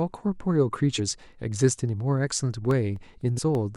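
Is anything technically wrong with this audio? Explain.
Yes, this speech clip has two kinds of technical fault.

Damaged data in a compressed stream occurs at 0.98 s and again from 3.37 to 3.39 s. Corrupted bytes in the encoded stream cause the decoder to misread those frames, lose its place, and hunt for the next valid frame header before playback resumes. Each spot comes out as a short squawk or blip.

Periodic USB or driver dropouts run from 2.71 to 3.55 s, recurring every 0.25 s, about five times in all. Something in the background stalls the USB link or audio driver on a steady schedule, and each stall loses roughly a millisecond of audio, replaced by silence. The result is a train of small, evenly spaced ticks riding on the speech, audible only where there is sound to interrupt.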